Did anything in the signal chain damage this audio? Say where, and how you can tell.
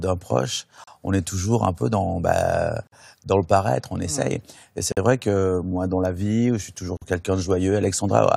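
Yes, there's a gap at a join of encoded pieces, a codec-stage problem. Short silences cut into the speech every 2.0 s: at 0.84 s (about 34 ms), then 48 ms each at 2.87 s (between "un peu dans bah" and "le paraître on essaye"), 4.92 s (just before "vrai que moi dans") and 6.97 s (right after "la vie je suis"). Each piece was encoded on its own and joined untrimmed, so encoder start delay plus last-frame padding leave holes, their edges smeared by the codec, before the speech resumes.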